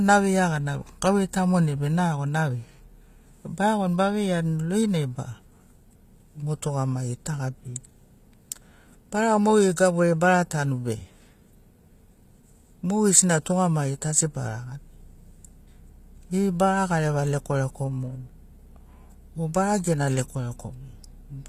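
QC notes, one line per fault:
Throughout: likely HE-AAC compression. Treble stays bright up to a hard cutoff at 14.9 kHz, yet s sounds turn gritty and lispy because that band is rebuilt from copied lower bands, which fits a 24 kbps stream. A plain low-pass would sound dull instead.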